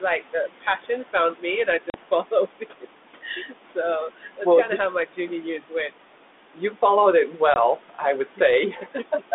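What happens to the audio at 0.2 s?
From 0.21 to 0.86 s, the noise suppressor cuts into the speech. It mistakes soft speech for noise and pulls about a tenth of a second of it down, by up to about 9 dB, so those sounds come out swallowed and faint. Unlike the overdone noise removal, which runs throughout, this is a brief dip in the speech itself.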